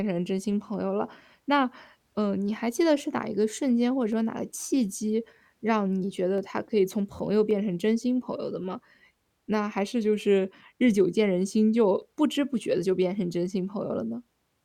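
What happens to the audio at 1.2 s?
At 1.2 s you're inside a run of clock drift buffer slips lasting from 0.74 s to about 14.28 s. A click lands every 1.13 s, around fifteen in all, which likely comes from two clocks disagreeing by roughly 150 ppm, so a handful of samples gets dropped or repeated each time.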